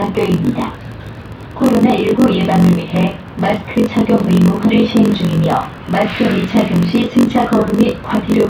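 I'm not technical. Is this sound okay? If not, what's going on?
No. Throughout the clip there is a block size mismatch (padded): one stage hands over shorter chunks than the next reads, which fits 1024-sample reads, leaving silent gaps. That causes a steady buzz near 46.9 Hz, and the sound plays at about 0.94 speed.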